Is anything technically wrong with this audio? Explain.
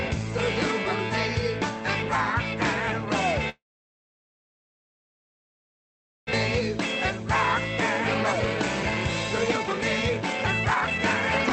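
Yes. From 3.49 to 6.35 s the sound breaks off. A brief fading buzz gives way to near-silence, about 1.6 s never returns, and it's likely a long network dropout. Jitter buffer speed-up follows at 8.14 to 8.96 s and 9.38 to 11.51 s. Tiny pitch-period slices are cut, running the audio 128% fast at unchanged pitch and sounding hurried. Through the Opus call path, the sound is band-limited near 8 kHz.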